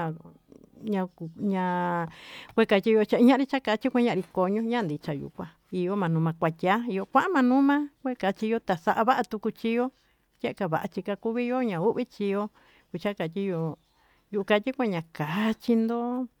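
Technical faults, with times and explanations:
No technical faults can be heard in this speech recording.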